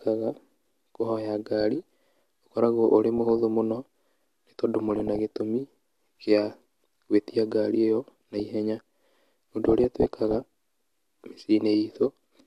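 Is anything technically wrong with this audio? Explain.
Yes. The speech has DAB burbling in five bursts: 1.61 to 2.19 s, ending just before "ũkoragwo ũrĩ"; 3.18 to 3.39 s, right after "ũkoragwo ũrĩ"; 4.89 to 5.25 s; 8.04 to 8.40 s, after "gwĩtia ngari ĩyo"; and 9.65 to 10.54 s. Weak reception left bit errors of a fraction of a percent. Some slipped past error correction into the MP2 data. Corrupted samples put short blips of noise in single sub-bands. It sounds like short blips of noise.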